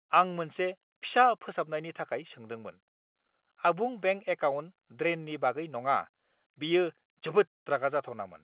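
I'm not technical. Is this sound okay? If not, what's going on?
Yes, it's fine: ordinary telephone-quality speech, nothing wrong.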